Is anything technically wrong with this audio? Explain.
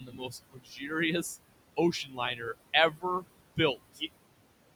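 Yes, the audio has two faults, both caused by the noise suppressor.

Noise suppressor artifacts, throughout: the suppressor pulls bands it judges to be steady noise down by about 21 dB, frame by frame, so the room noise, which sits about 16 dB below the speech, drops away between phrases and returns under them.

Speech cut by the noise suppressor, at 0.01–0.35 s (about 12 dB), 0.51–0.91 s (about 21 dB), 2.04–2.19 s (about 10 dB) and 2.91–3.04 s (about 17 dB): quiet speech was mistaken for noise and turned down with it, so those parts sound swallowed and faint.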